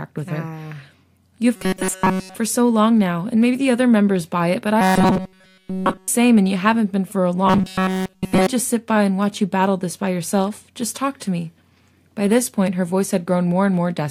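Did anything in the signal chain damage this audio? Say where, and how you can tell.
Yes, there's robotic sound from repeated short buffers at 1.56–2.35 s, 4.81–6.08 s and 7.47–8.47 s. The speech turns into a stiff metallic buzz at 188 Hz, which fits a roughly 5.3 ms chunk being looped almost entirely, likely a driver or buffer underrun.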